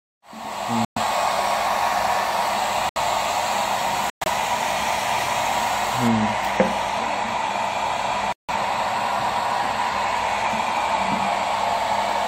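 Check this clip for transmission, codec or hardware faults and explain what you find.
Two kinds of fault are present: four muted corrupt frames, and de-emphasis applied wrongly over the second half.

Corrupt frame muted occurs at 0.85 to 0.98 s, 2.89 to 2.97 s, 4.10 to 4.28 s and 8.33 to 8.50 s. Each is a sudden hole of silence, 0.08 to 0.18 s long. Damaged compressed frames failed to decode, and the player substituted silence. The hole lengths fit runs of several consecutive frames. The gaps start abruptly, and the surrounding timing does not shift.

De-emphasis applied wrongly runs from 6.08 s to the end. A treble cut meant to reverse pre-emphasis was applied where none existed, or applied a second time. The response slopes smoothly downward toward the top. At 10 kHz it sits about 8 dB below 1 kHz. The sound turns dull and muffled, losing air and brightness. The last muted gap, at 8.33 s, falls inside this duller stretch.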